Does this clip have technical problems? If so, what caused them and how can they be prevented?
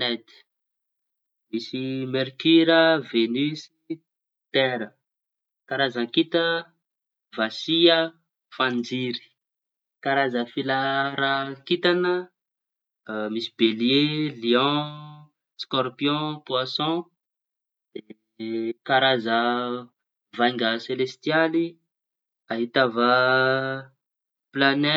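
No, the speech signal holds steady throughout, with no audible technical faults and so nothing that needs preventing.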